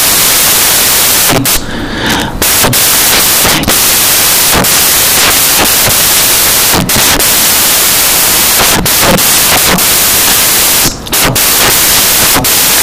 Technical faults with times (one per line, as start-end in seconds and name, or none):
0.00-12.82 samples built from the wrong bytes